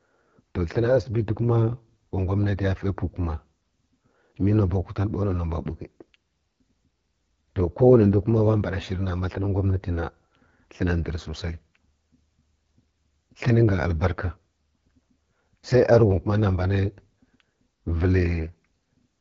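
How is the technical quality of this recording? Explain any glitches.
Quality is limited by AMR wideband (HD Voice) codec damage throughout the speech. The pulse-driven vocal tract model strains at what sounds like the 8.85 kbit/s rate, making the voice rough and raspy, with synthetic noise filling the top band and nothing above 7.5 kHz.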